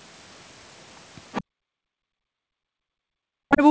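The echo canceller likely left part of the loudspeaker signal in the microphone feed, so from 1.32 to 1.44 s a faint scrap of the other side's voice leaks through, roughly 20 dB below the talker and heard as a brief fragment.

Right after that, from 1.44 to 1.72 s, the echo canceller gates the background. It clamps the microphone down hard while the loudspeaker plays, so the room sound drops away by about 40 dB for roughly a third of a second before it returns.

From 2.0 to 3.62 s both sides talk at once. The canceller likely cannot tell the talker from the loudspeaker echo and turns both down, so this is speech suppressed in double talk. For about one and a half seconds the voice dips steeply, by as much as around 40 dB. Throughout this stretch the band stops at 8 kHz, which fits the G.722 call codec.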